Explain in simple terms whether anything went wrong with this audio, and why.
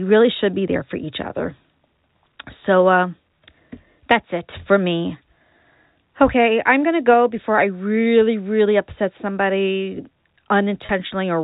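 Near the very end, at about 10.86 s, the sound briefly stalls for roughly 30 ms. This is packet loss with pitch repetition: a small piece of audio went missing in transit, which fits a single lost packet, and the receiver filled the gap by repeating the last bit of the voice's pitch. You hear a tiny held, buzzy note rather than a silent hole or a click, which is what sets it apart from a plain dropout.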